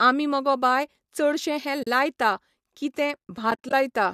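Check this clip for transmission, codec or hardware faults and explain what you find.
The clip has AAC frame loss with muting at two points. Decoding runs through what is likely low-delay AAC compression, and its short frames are what make these dropouts so brief.

From 1.83 to 1.87 s, a run of lost frames was zeroed by the decoder. The overlapping windows fade the sound out and back in, leaving a soft 40 ms hole, consistent with about four 10 ms frames.

From 3.51 to 3.73 s, losses are scattered across about 220 ms and total about 110 ms, with the longest gap around 40 ms. The sound flutters through several soft-edged dropouts rather than one clean gap.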